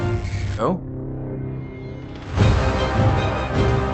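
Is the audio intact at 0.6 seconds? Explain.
No. At 0.57 to 0.59 s a skip ahead drops roughly 0.7 s of audio, so playback jumps forward, joining both sides almost directly with no gap.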